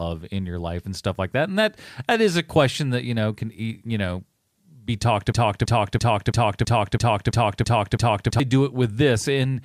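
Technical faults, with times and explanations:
5.32 to 8.40 s, broken-record loop: right after "you know be talked", the speech locks into one fragment of about 0.33 s that repeats exactly, back to back, nine times, giving a stuttering, machine-like chant for about three seconds before normal playback resumes. The likely cause is a player, encoder or stream that stalled and kept re-sending the last block it held, so whatever speech belonged in that span never plays.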